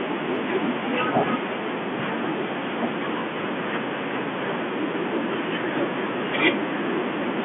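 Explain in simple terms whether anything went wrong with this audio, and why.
Nothing went wrong with this audio: the speech sounds just as an ordinary phone call would carry it, with no faults to point to.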